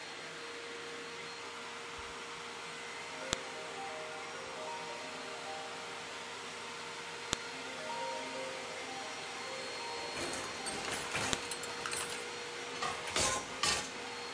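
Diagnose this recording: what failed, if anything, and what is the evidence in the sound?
At the storage or streaming stage, 4-second WAV pieces were joined with their headers intact, a file header played as audio, causing sharp clicks at 3.33, 7.33 and 11.33 s.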